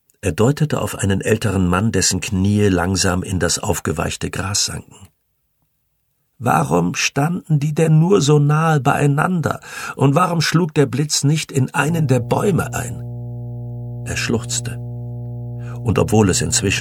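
At 11.89 s a steady 60 Hz mains hum comes in and sits there right to the end. It's fairly strong, not far under the sound itself, the classic low drone you get when power-line current leaks in through a ground loop or nearby transformer.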